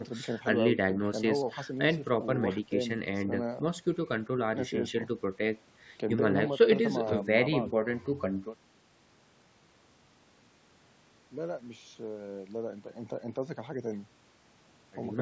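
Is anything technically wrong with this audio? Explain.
No, the speech shows no technical fault: it has passed through a call's microphone processing, which limits the content to nothing above 8 kHz and trims the lowest bass with its high-pass filter, and both are the normal behaviour of that path.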